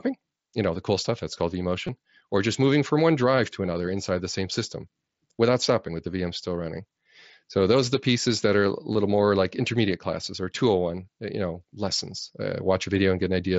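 Speech passed through a wideband mSBC Bluetooth headset link, and it shows concealed Bluetooth headset packet loss twice. At 1.87 s, between "cool stuff that's called" and "or just moving from", a 15 ms run of two lost frames is concealed. From 8.92 to 8.95 s, after "pieces that are a", a 30 ms run is filled by repeating the last matching stretch of waveform. It buzzes briefly at full level and warbles as real audio resumes. A spectrogram shows smeared, repeated harmonics there.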